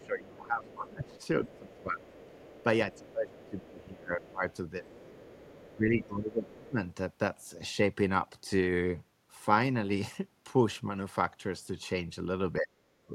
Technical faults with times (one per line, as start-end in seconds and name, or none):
0.00-2.40 speech suppressed in double talk
0.00-6.71 other side's voice leaking through
2.97-5.12 speech suppressed in double talk
5.75-6.78 speech suppressed in double talk
12.59-13.15 speech suppressed in double talk